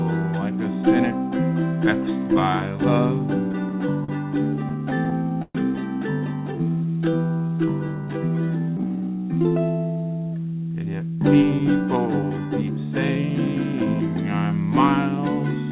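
From 3.52 to 5.57 s the sound stutters and drags through twelve short stalls. Each one holds and stretches the last sound, fading it in the longest, 123 ms. These are repeated stalls (stutter): late packets kept emptying the jitter buffer, so about 269 ms was filled in and nothing was lost.

Between 6.53 and 9.17 s the audio slows to about 89% speed at unchanged pitch, with drawn-out stretches. This jitter buffer slow-down comes from the receiver repeating single pitch periods to rebuild its reserve, adding 300 ms in total.

From 10.86 to 14.16 s the sound runs hurried at about 110% speed, still at the same pitch. This is a jitter buffer speed-up. The buffer held more than its target, so the receiver trimmed short pitch-period pieces, removing around 0.4 s. Throughout, the band stops at 4 kHz, which fits a G.711 A-law call path.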